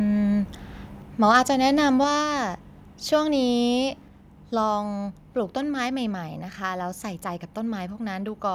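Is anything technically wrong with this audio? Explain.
Yes, two things. Around 1.35 to 1.37 s there's a brief harsh crackle on a loud peak, likely microphone overload: the input ran about 2 dB past the converter's limit, flattening about 3% of the samples. Then at 2.04 s the whole level drops by about 4 dB in one step, likely the microphone volume being stepped down by the call software after that distorted peak.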